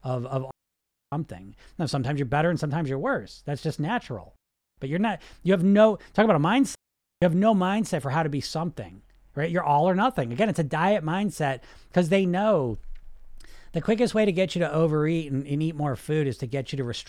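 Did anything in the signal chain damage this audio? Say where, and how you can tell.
Yes, there's a digital wireless dropout on the radio link. The speech cuts to near silence at 0.51–1.12 s, 4.36–4.78 s and 6.75–7.22 s (roughly 0.6, 0.4 and 0.5 s). The receiver lost too much data and muted with a quick fade, so the gaps are clean with no noise bursts.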